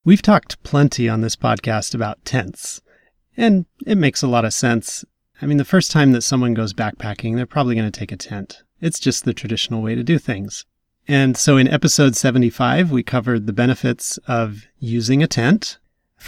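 No technical faults can be heard anywhere in the recording. The speech runs without any break or disturbance in its delivery.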